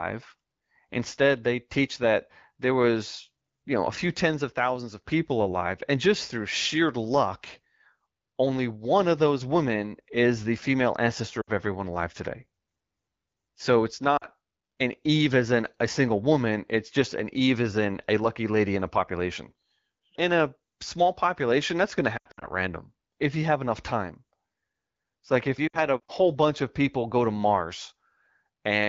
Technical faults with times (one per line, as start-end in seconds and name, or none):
11.41-11.50 lost AMR speech frames
14.17-14.26 lost AMR speech frames
22.17-22.46 lost AMR speech frames
25.67-25.78 lost AMR speech frames